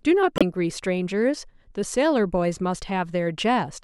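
A speech clip with a broken MP3 bit reservoir between 0.35 and 0.43 s. For about 70 ms the audio jumps ahead and comes out garbled. The likely cause is missing MP3 frames: the frames after the gap look back into the bit reservoir for data stored in earlier frames and decode bytes from the wrong frame. The span covers roughly three frames of 26.1 ms each, which fits a short run of damaged frames right after the cut.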